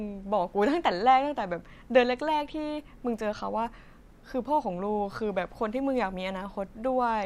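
No technical faults can be heard anywhere in this recording.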